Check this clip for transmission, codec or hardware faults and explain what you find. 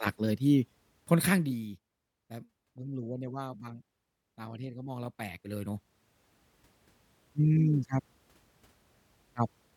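The speech has zipper noise in two places, from 1.17 to 1.66 s and from 4.86 to 6.25 s. In each, the gain moves in discrete jumps with no interpolation between them. The first is a cut of roughly 15 dB in steps of about 1 dB. The second brings the level back up by roughly 15 dB in smaller increments. Each jump adds a tiny discontinuity, at around fifty a second, which is heard as a fine ticking buzz riding on the speech while the level changes.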